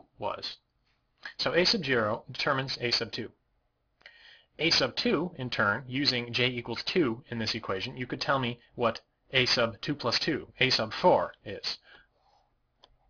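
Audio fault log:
Throughout, aliasing: the sound was brought down to a low rate, which fits 48 kHz going to 11 kHz, with no filter first, so anything above about 5.5 kHz folds back as gritty, metallic tones sitting only about 10 dB under the real content.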